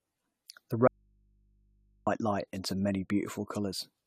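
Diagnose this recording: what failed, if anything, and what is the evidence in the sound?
The speech has a swirly, hollow quality with smeared consonant attacks, and nothing reaches above about 16.4 kHz. The smearing is heavier than a single pass at this bandwidth would explain. The likely cause is generation loss at the codec stage: repeated AAC-LC decoding and re-encoding, which fits a 96 kbit/s chain run around ten times. Each pass re-quantises on a shifted frame grid, so noise and spectral holes accumulate.

From 0.88 s to 2.07 s the speech cuts out abruptly for about 1.19 s and leaves only mains hum at about 40 dB below the speech level. The hard edges at both ends rule out a natural pause or a fade. This is an audio dropout to a faint residue, likely in the analogue wiring or input stage: the source signal was lost while the downstream path stayed live, so the open input picked up hum until the connection returned.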